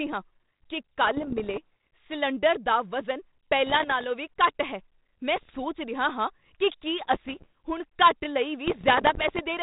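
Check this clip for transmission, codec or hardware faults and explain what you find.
There's one recurring fault: bit errors on an ADPCM link, in five bursts at 1.04–1.59 s (after "ਹਾਂ ਕੀ"), 3.66–4.04 s, 5.36–5.59 s (between "ਹੈ ਮੈਂ" and "ਰਿਹਾ ਹਾਂ ਕੀ ਕੀ"), 7.01–7.46 s (before "ਹੁਣ ਘੱਟ ਲਈ"), and 8.66–9.44 s. Roughly 0.5 to 0.7 percent of bits get flipped, which throws off the decoder's step size and predictor. You hear pops and rough, crackly patches with brief jumps in level. The underlying band-limited ADPCM coding sounds consistent with a 32 kbit/s telephone link.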